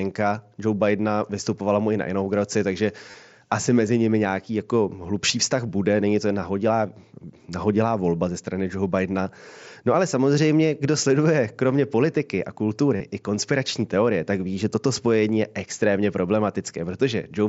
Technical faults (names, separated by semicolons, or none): concealed Bluetooth headset packet loss